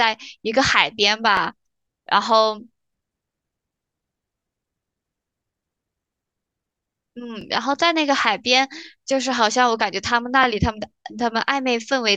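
Overlapping chunks cause a brief stutter in this speech at 1.37, 4.39, 7.41 and 10.44 s. The audio was handled in 3.0 s chunks, each beginning before the previous one finished, so about 21 ms is played twice at every join.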